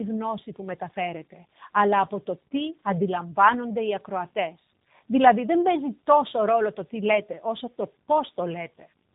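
Throughout, the speech carries tandem speech coding. It passed through CVSD, then G.711 A-law, then G.729A, so a second speech coder rebuilt the first one's already damaged output. It sounds rough, muffled and warbly. A spectrogram shows nothing above 3.8 kHz and smeared, unsteady harmonics.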